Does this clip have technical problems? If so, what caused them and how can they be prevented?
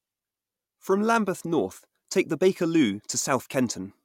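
No, nothing in this speech clip points to a technical problem, so there's no cause to track down and nothing that needs preventing.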